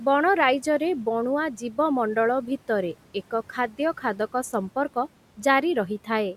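Speech with quiet room noise well underneath, and between 1.6 and 1.78 s the noise suppressor cuts into the speech, dipping it by about 10 dB so a brief stretch sounds swallowed.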